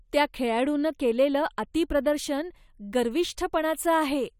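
Nothing stood out on listening to this short speech recording.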